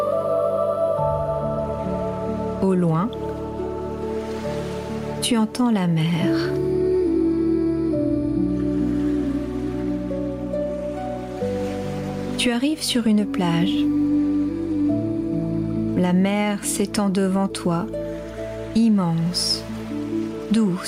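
Gain pumping runs throughout the clip, with the level swinging by around 10 dB. The likely cause is input gain set far too high for the microphone, with a fast limiter or compressor clamping down on each peak and releasing in the pauses. Loud and soft passages sit unnaturally close in level, giving a squashed, breathing quality.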